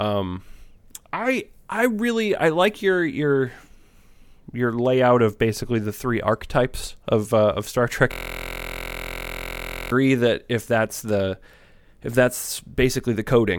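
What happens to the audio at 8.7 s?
At 8.7 s the speech sits inside a system hang loop running from 8.12 to 9.92 s. The same 23.22 ms slice repeats exactly, dozens of times, fitting a 1024-sample ring buffer. Unlike a mains hum, the 43.1 Hz buzz carries the frozen fragment's timbre.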